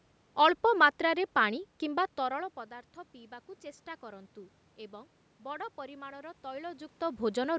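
Nothing's gone wrong in this speech recording; the level shifts around 2 and 6.5 seconds are just the talker moving relative to the microphone, the background noise is the room itself, and the lack of anything above 8 kHz comes from ordinary call microphone processing.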